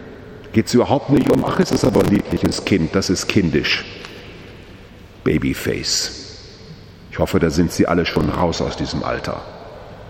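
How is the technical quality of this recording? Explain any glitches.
The recording has processor overload crackle at two points. From 1.16 to 2.58 s, and again from 8.13 to 8.42 s, the processor misses many buffer deadlines. Each miss replays stale audio in small chunks, likely around 10 ms, so a gritty, tearing crackle rides over the audio.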